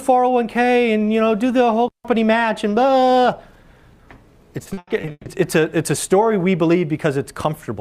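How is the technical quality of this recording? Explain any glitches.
The recording has one clear fault. From 4.63 to 5.27 s the sound turns choppy, with short dropouts in quick succession. This is repeated packet loss: audio data kept arriving late or not at all, so the decoder papered over each hole by extending the last bit of sound it had. About half of that span, roughly 320 ms, is this repeated filler rather than real audio, and the longest single gap is 140 ms.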